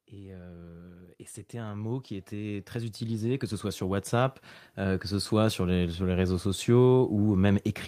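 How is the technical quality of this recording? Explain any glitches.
The level swells steadily from 0.1 to 5.39 s, speech and background rising together by about 19 dB. That is automatic gain rising: the gain control judged the input too quiet and kept turning it up.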